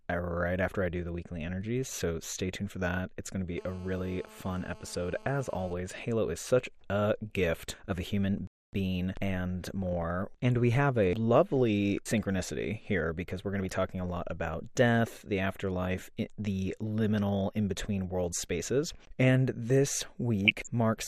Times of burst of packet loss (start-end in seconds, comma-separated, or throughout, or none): none